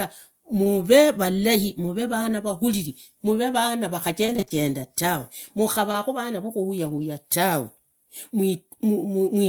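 At 0.63 to 0.67 s there is a short concealed packet loss. About 20 ms of the speech arrived too late to decode. The receiver filled the hole by extending the preceding sound, then blended back. It is heard as a brief smear or wobble.

From 4.26 to 7.03 s come scattered short gaps. About seven separate packets went missing, each roughly 20 ms or less, totalling 160 ms. Each hole was patched by continuing the last sound. The speech stays clear, with small hiccups and ticks dotted through the stretch.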